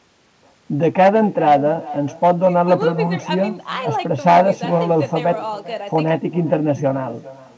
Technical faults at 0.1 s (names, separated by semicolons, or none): echo with no canceller